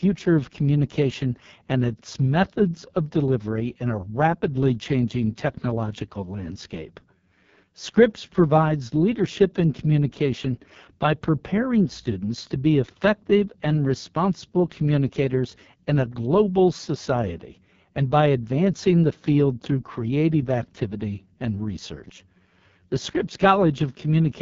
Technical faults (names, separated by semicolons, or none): AMR wideband (HD Voice) codec